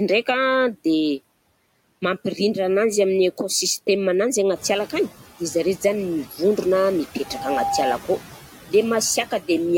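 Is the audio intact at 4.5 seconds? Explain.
No. Noise suppressor artifacts run throughout: band-by-band cuts of about 14 dB leave the room noise, which rises around here, sinking between the words and rising under the speech rather than gating cleanly.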